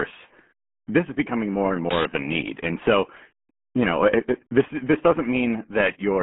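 Throughout, the RealAudio 14.4 codec makes the speech muffled and gargly, as an 8 kbit/s coder would; a spectrogram shows energy only from 200 Hz to 3.4 kHz, blank above 3.9 kHz.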